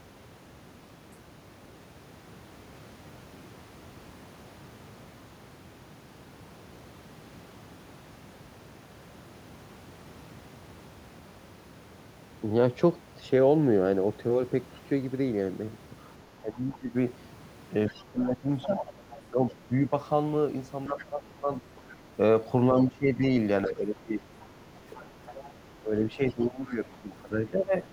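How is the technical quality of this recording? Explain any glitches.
The recording has two echo-related faults, mostly concentrated in the second half.

Other side's voice leaking through: the echo canceller likely left loudspeaker sound in the microphone. A faint 40 ms scrap appears at 1.12 s, far below the speech. Longer, more audible stretches, about 20 dB down, run from 17.87 to 21.91 s and from 23.67 to 26.73 s.

Speech suppressed in double talk: with both sides talking at once, the canceller likely turned everything down. From 16.42 to 27.85 s, about five seconds of the talker's voice dips in pieces, by roughly 15 dB at worst.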